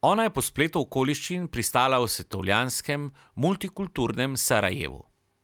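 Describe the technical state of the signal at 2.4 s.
At 2.4 s the speech signal is intact, with no dropout, distortion or other fault at that moment.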